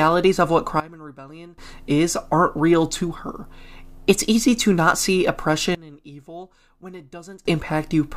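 A digital gain setting was likely changed without a ramp, producing sudden gain jumps. The speech and background noise drop together by about 19 dB from 0.80 to 1.58 s, between "of what" and "is aren't real to", and by about 20 dB from 5.75 to 7.45 s, after "easy to not see".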